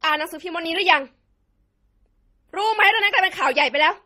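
Throughout the speech, two kinds of compression artefact sit on top of each other: a watery, swirling smear over a second layer of grainy roughness, with nothing above 15.8 kHz. This points to transcoding between lossy codecs, likely a low-bitrate MP3 re-encoded to Opus.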